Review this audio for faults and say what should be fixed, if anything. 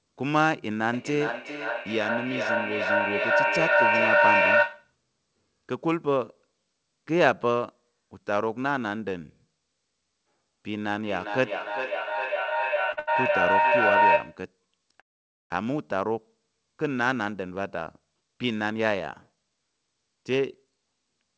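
From 0.93 to 4.94 s there is feedback echo between two devices. A second device in the room replays this microphone's signal, and it is picked up again, so each phrase returns roughly every 0.4 s, thinner and more ringing, peaking about 5 dB above the speech. On a spectrogram it appears as faded copies of the same shapes at fixed spacing. Keep only one device joined per room, or mute the second one's loudspeaker.

From 10.7 to 14.47 s a feedback howl builds. The same loop gains level on every trip, so the repeats narrow to a tone near 1 kHz that pulses at about 0.4 s intervals and reaches about 5 dB over the speech. A spectrogram shows a bright horizontal line with periodic swelling. Break the loop by muting or separating the devices.

Within that span, from 12.92 to 13.66 s, come repeated stalls (stutter). Packets arrived late four times, the jitter buffer emptied, and the receiver stretched the last sound for about 185 ms in total, with the longest fill being 80 ms. 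Nothing is lost, but the audio drags. The waveform shows short smeared, repeated segments. A steadier network or a deeper jitter buffer would prevent this.

From 15.00 to 15.52 s there is a call audio freeze. The sound stops for about half a second, nearly all of it silent, then resumes where it left off. The likely cause is packets held up in transit, which drained the buffer. It appears as a flat gap in the waveform and a blank column on the spectrogram. Improving network stability would prevent it.

From 17.14 to 20.94 s comes a jitter buffer speed-up. After the backlog, the receiver cut short pitch-period pieces, roughly 0.4 s in all, so the audio runs at about 111% with unchanged pitch and sounds hurried. Syllables look compressed on the spectrogram, with harmonics at unchanged spacing and nothing above 8 kHz from the G.722 path. Limiting delay swings upstream would reduce the need for such catch-up.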